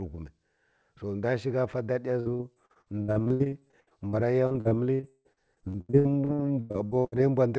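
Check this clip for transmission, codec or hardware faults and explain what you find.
One transmission fault is present. Repeated packet loss (robotic sound) runs from 2.20 to 7.19 s. Dozens of packets go missing. Each hole is patched by stretching the last sound, so about a third of the stretch is concealed. The speech turns choppy and robotic, with gaps up to 158 ms. The call path itself cuts everything above 8 kHz, which fits a wideband codec such as G.722.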